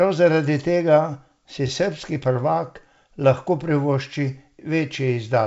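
Nothing stood out on listening to this speech, which comes through the G.722 wideband telephone path at 64 kbit/s with nothing about it drawing attention.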